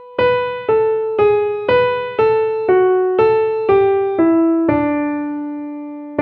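Nothing stood out as a technical problem on listening to this audio.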